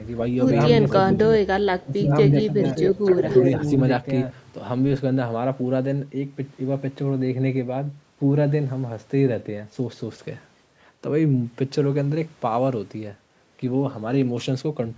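From the very start until 4.32 s, the speech plays twice. A doubled audio track is the likely cause, with a second full-band copy trailing by roughly one and a half seconds. It is about as loud as the original, dry, and stops abruptly.

Inside that stretch, the talker dips three times: 1.07 to 1.29 s, 1.57 to 2.12 s, and 2.48 to 2.77 s. This is likely speech suppressed in double talk. The echo canceller turned the voice down while both sides spoke. The middle dip is deepest, around 15 dB. The others are shallower.

From 2.87 to 3.49 s, an echo leak likely lets a copy of the voice return 274 ms late, at about the same level as the speech. The loudspeaker echo slipped past the canceller.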